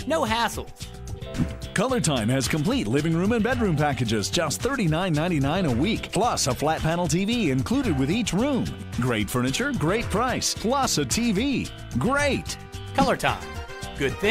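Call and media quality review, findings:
Nothing to flag here; listened all the way through and heard no faults worth raising.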